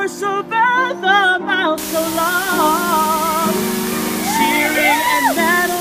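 At 1.78 s, low bit depth with dither sets in and lasts to the end. The sound now uses only 4 bits, with dither added before rounding. The error becomes a steady, even hiss, roughly 10 dB below the signal, without distortion.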